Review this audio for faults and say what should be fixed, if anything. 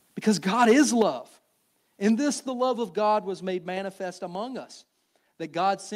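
Between 0.61 and 1.02 s the loudest syllables take on a harsh, crackling edge, with peaks running about 4 dB past full scale and a small share of samples flattened. This is microphone overload, most likely from input gain set too high so the converter shaved off the waveform tops. Unlike codec distortion, the grit tracks only the loudest moments and vanishes on quieter syllables. Prevent it by setting input gain with headroom before recording.

The level then drops abruptly twice: by about 6 dB at 1.02 s, right after the distorted stretch, and by about 4 dB at 2.49 s, just before "love of". Voice and background fall together in a single step, which points to the microphone volume being stepped down, likely by the call software's automatic gain control reacting to the clipping. A fade or a noise gate would sound different, because those change level gradually or affect only the background. 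Prevent it by disabling automatic microphone adjustment and fixing the gain manually.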